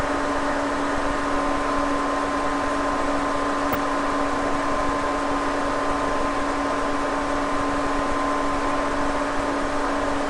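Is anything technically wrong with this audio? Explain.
Yes. There are two brief bursts of DAB burbling, from 3.73 to 3.76 s and from 6.09 to 6.17 s. Weak reception let bit errors, at a rate of a small fraction of a percent, slip past error correction into the MP2 data. Corrupted samples then put short blips of noise in single sub-bands.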